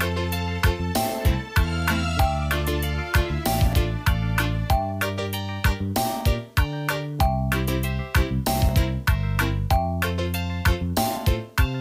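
At 1.25, 3.73 and 8.69 s the sound skips forward by roughly 20 ms. This is audio missing between chunks, likely lost as one 2.5 s chunk closed and the next opened. Each join appears as an abrupt waveform step and a thin vertical spectrogram line.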